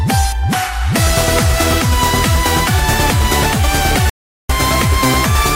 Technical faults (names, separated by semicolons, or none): audio dropout to silence